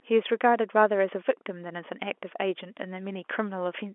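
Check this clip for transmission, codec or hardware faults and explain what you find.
Nothing here counts as a fault: the speech comes over an ordinary G.711 telephone line, so it's held to the usual 300 Hz to 3.4 kHz band, and that narrow, phone-like sound is simply how such a line is meant to sound.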